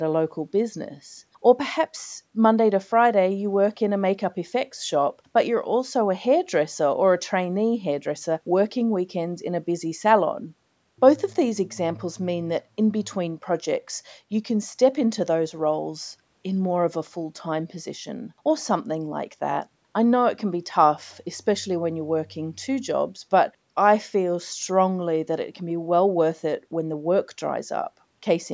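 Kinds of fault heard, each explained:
No faults heard.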